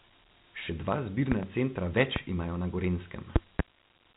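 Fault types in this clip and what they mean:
Dialogic VOX ADPCM: The speech was coded with telephony 4-bit ADPCM, consistent with 32 kbps, which cuts everything above 3.9 kHz and tracks the waveform coarsely. The result is narrow, muffled speech with a plainly audible gritty hiss clinging to it.
Loud pop: Sudden voltage spikes, likely from a switch, plug or static discharge, landed on the signal, each peaking about 20 dB above the speech. A double pop comes at 1.32–1.46 s, a single one at 2.16–2.19 s just before "imajo na", and another double at 3.36–3.62 s.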